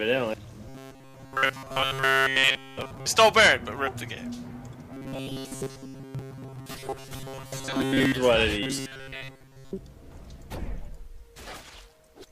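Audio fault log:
0.69–3.06 s, 4.93–8.12 s and 8.63–9.71 s: robotic sound from repeated short buffers. The sound turns into a rigid, metallic buzz at 134 Hz. The likely cause is audio arriving too seldom, so a fragment of about 7.5 ms is replayed in place of most of the real signal.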